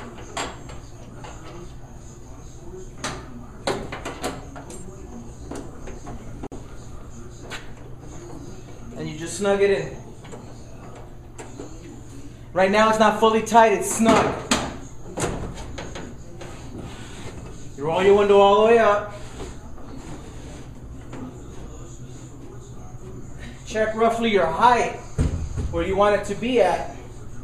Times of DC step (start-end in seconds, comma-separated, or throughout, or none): none